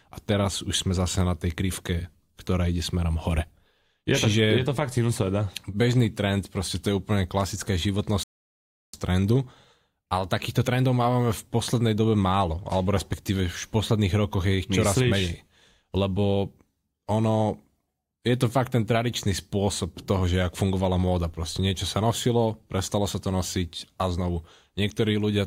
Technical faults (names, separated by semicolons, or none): rebuffering stall